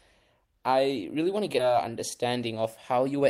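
It's a speech clip, and at 1.59 to 1.61 s there's a skip ahead: something like 0.7 s of speech never plays, and the two sides are butted together with no gap. Either that stretch was lost on the way, or the jitter buffer overflowed and dumped it while newer audio was already queued. Right after, from 1.69 to 3.21 s, you get a jitter buffer speed-up. The receiver trims short pitch-period chunks over and over to shed excess delay, about a tenth of a second in total. The speech runs at around 106% with the pitch unchanged, so it sounds hurried.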